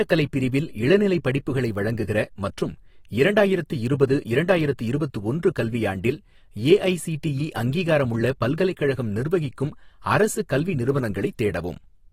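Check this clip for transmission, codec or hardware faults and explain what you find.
One codec fault runs through the whole speech clip. AAC compression, likely AAC-LC at a low bitrate around 32 kbps, starved the coder of bits, so it coarsely quantised the frequency lines and cut the band. Nothing remains above 16.6 kHz, and the speech sounds plainly dull and smeared, with a fizzy, warbling edge on sibilants and held sounds.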